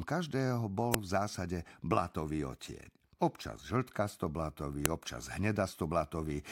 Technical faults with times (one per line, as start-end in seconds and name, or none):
0.94 file header played as audio
4.85 file header played as audio